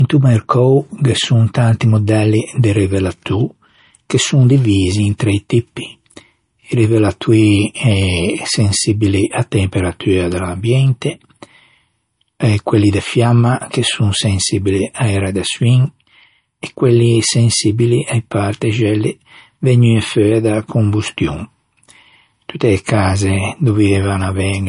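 From start to finish the speech sounds dull, with nothing at all above about 10.6 kHz and the artefacts of an earlier low-bitrate encoding still present. The likely cause is low-bitrate audio saved at a high bitrate: an MP3 at something like 40 kbit/s, re-encoded as MP3 at around 192 kbit/s. The bigger file keeps the first encoder's cut-off and artefacts, and the second pass adds almost nothing.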